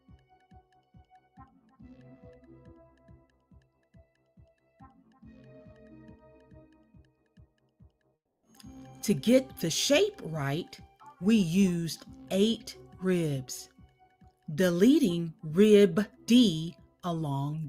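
The noise suppressor misjudges parts of the sound as noise and pulls them down harder than their surroundings, between 0.09 and 0.61 s (dips of about 7 dB), 0.94 and 1.74 s (about 10 dB), and 2.9 and 3.25 s (about 7 dB). Within each window, a few tenths of a second of sustained or decaying sound sink audibly or have their tails clipped short, while sharper onsets pass largely intact.

At 8.15 s the audio stream breaks off, likely a long network dropout: the last sound is stretched into a fading buzz for roughly 280 ms. It then falls to near-silence for about 270 ms before the audio resumes at 8.45 s. About 280 ms of the original material is simply gone, so the sound jumps forward rather than picking up where it stopped.

The suppressor cuts sound again from 13.69 to 14.31 s (about 8 dB) and from 16.75 to 16.95 s (about 11 dB), with the same sagging, shortened decays.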